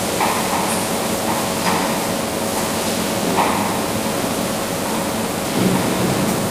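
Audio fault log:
throughout, block size mismatch (padded): each block arrives short and is zero-filled, which fits a 1024-sample read, giving a 93.8 Hz buzz and sound running 0.938 times normal speed at near-normal pitch.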